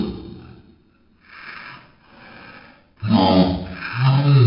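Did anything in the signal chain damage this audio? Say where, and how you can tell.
Yes, a wrong sample rate at playback. Throughout, the sound runs at a third of normal speed, about 19 semitones low, which fits 48 kHz material played at 16 kHz.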